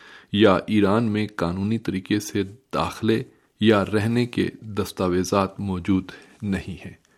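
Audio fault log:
No audible faults detected.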